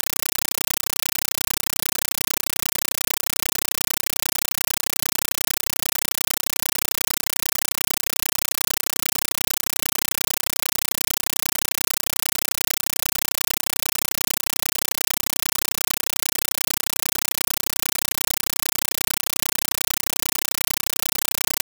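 Throughout, a compressed stream played as audio replaces the speech: an undecoded AC-3 stream is read as samples. Each frame becomes an 8 ms noise burst and zero padding, 31.25 times a second, heard as chattering static. A spectrogram shows broadband stripes every 32 ms, and the waveform shows dense blocks between flat gaps.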